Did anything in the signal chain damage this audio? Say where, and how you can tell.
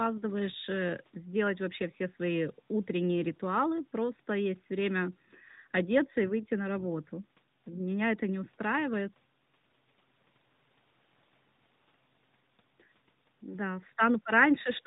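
No, nothing in this speech recording stood out as damage from any stage of the signal chain on listening.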